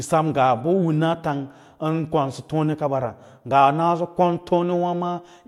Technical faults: none

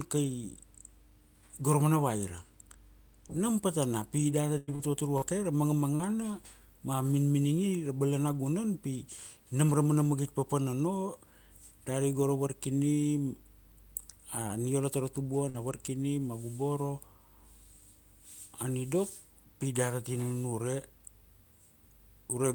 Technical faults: repeated packet loss (robotic sound); burst of packet loss; lost packet rebuilt from error correction

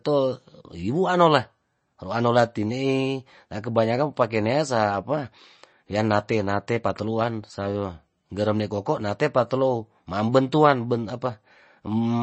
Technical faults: MP3 compression

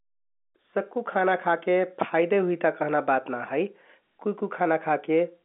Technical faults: none

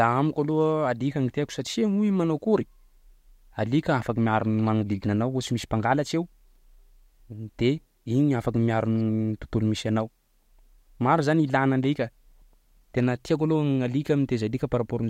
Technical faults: none

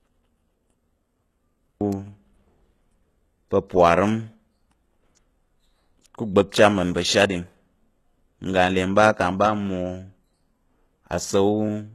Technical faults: HE-AAC compression

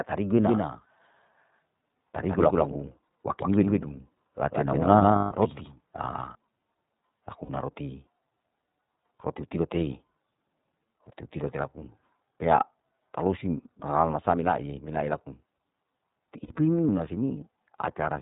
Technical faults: iLBC codec; doubled audio track; lost iLBC frames

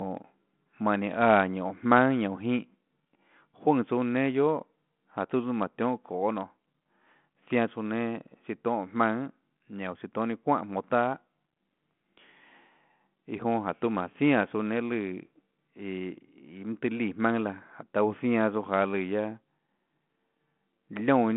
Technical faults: none

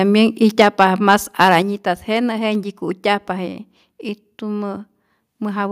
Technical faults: microphone overload; microphone volume stepped down

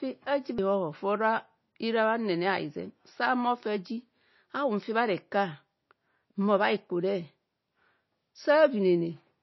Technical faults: MP3 compression

